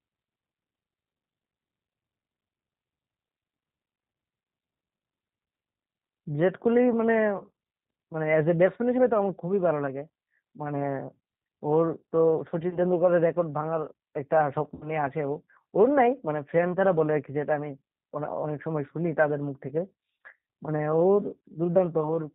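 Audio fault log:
throughout G.729 codec: nothing above 4 kHz, a rough, slightly synthetic texture fitting an 8 kbit/s pulse-coded speech codec, steady rather than intermittent like the losses.
12.70–12.78 s VoIP packet loss concealed by the speech codec: a brief smear instead of a silent gap, fitting one lost 20 ms packet; the decoder repeats its last pitch and filter, then recovers gradually.
14.75–14.91 s VoIP packet loss concealed by the speech codec: a longer stretched sound fading in level, fitting about three lost packets; weak, distorted sound lingers after the gap, unlike a clean dropout.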